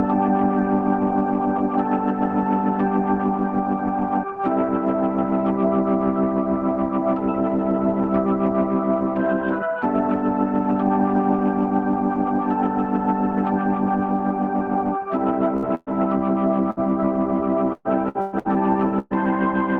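Bursts of packet loss hit at 15.57–15.66 s, 15.75–15.90 s and 16.71–16.80 s. Each 60 to 120 ms hole is filled by stretching and fading the last sound, and then the audio jumps ahead. From 17.73 to 18.48 s, repeated packet loss causes robotic sound: four gaps, the longest 121 ms, leave nearly half the stretch concealed, so the sound turns choppy. A final 120 ms burst at 18.99–19.14 s has the same held, fading fill followed by a skip. The audio tops out near 12 kHz, as expected from the Opus call codec.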